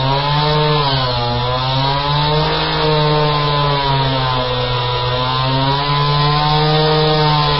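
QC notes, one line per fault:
Throughout: low-bitrate audio saved at a high bitrate. Nothing above 5.5 kHz, a cut-off far too low for a high-rate MP3, likely left by an earlier low-rate encode.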